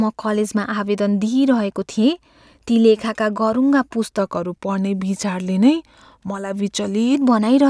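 Speech, with a wrong sample rate from 4.19 to 7.15 s. The audio runs slow and low there, at 0.919 times normal speed and 1.47 semitones down. That fits 24 kHz audio played at 22 kHz with no conversion, so speed and pitch drop together.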